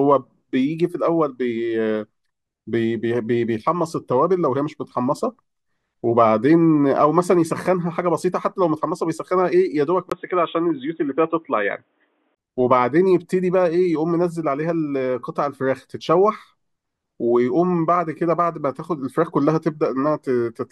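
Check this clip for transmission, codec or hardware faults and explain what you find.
One fault turns up in the speech, between 10.10 and 12.37 s: the input switched to a poorer device. A short gap of about 20 ms at 10.10 s likely marks the system changing microphones or dropping to a headset call profile. That device passes nothing above 3.8 kHz, so the voice turns dull and boxy, and it carries a faint hiss of its own, roughly 45 dB down, at much the same level. On a spectrogram the upper band goes dark and flat across that stretch, with a brief blank column at the switch.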